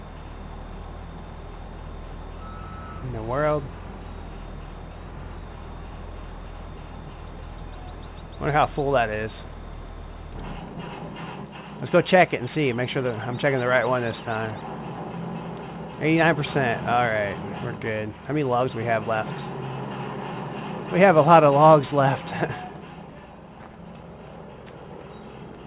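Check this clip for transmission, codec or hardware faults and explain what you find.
One transmission fault is present: a jitter buffer speed-up from 7.43 to 8.59 s. The receive buffer had built up more delay than its target, so it dropped short segments of one or a few pitch periods several times in a row, about 50 ms in total. That runs the audio roughly 4% fast with the pitch unchanged. The band-limited sound, with nothing above 4 kHz, fits a narrowband G.711 call path.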